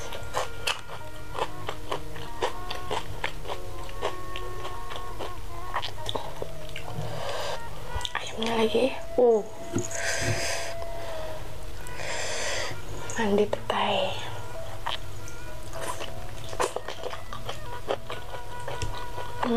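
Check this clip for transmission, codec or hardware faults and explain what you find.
There are three short skips, at 6.06, 9.04 and 17.96 s, each with the sound jumping ahead by roughly 20 ms and no gap of silence. This is likely a dropped buffer (overrun): samples were overwritten before being read, so the surrounding audio joins directly.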